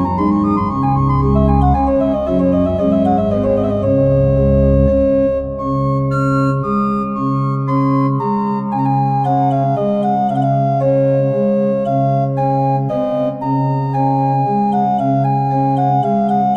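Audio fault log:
No faults heard in this clip.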